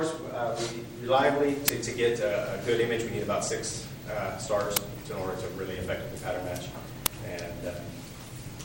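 Three short, harsh loud cracks cut into the audio at about 1.68 s, 4.77 s and 7.06 s, each a sharp crackling blast. This is an uninitialised buffer fault: a playback block was sent out before any audio had been written into it, so stale memory contents were played as samples. The bursts last about 10 ms, 10 ms and 5 ms.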